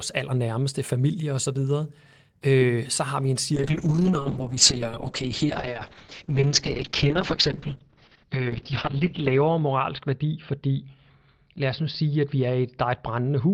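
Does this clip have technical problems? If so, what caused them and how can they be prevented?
Yes. At 3.56 s, just after "så har vi en", a call bitrate drop sets in and lasts to the end. The encoder falls from 32 to 6 kbps, staying at its lowest for about 5 s, and the audio bandwidth narrows from 20 kHz to 6 kHz. The speech turns muffled and coarse. Unlike packet loss, there are no gaps or stutters, only steadily degraded coding. To prevent it, keep the network path uncongested and set a sensible minimum bitrate on the encoder.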